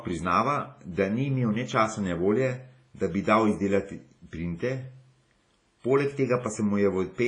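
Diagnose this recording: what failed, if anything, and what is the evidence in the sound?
WMA compression at the codec stage, throughout the speech: ringing, washy smearing, breathing hiss and nothing above 10.6 kHz, likely a heavy low-bitrate encode near 24 kbps zeroing weak components.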